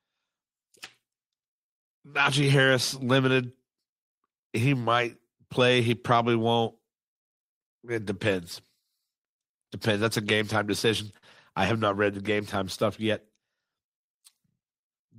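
At about 11.17 s the speech hits a short stall from a late packet. The packet arrived late, the jitter buffer ran dry, and the receiver stretched the last sound for about 51 ms. Nothing is lost, but that sound drags a touch, with a faint buzz or dip, before carrying on.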